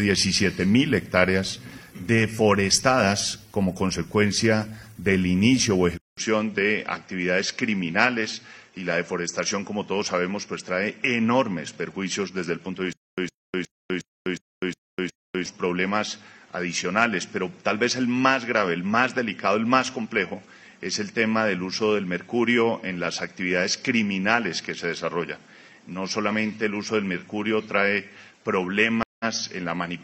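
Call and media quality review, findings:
Dull, narrower sound from 5.97 s to end, after a 200 ms dropout. Nothing above 7.5 kHz, level down about 5 dB, new noise floor about 35 dB below signal. Input switched to a poorer device, likely a second mic or headset call profile.

Stutter with silent gaps, 12.93 to 15.46 s. The same 110 ms fragment repeats 7 times, each followed by about 251 ms of digital silence, a 361 ms period. Player or stream likely stalled, replaying its last buffer on each retry; intervening audio lost.

Stream reconnect at 29.03 to 29.25 s: a 168 ms silence, then playback resumes at roughly the same point, with no audible skip forward. Connection dropped, player reconnected and restarted its decoder mid-stream.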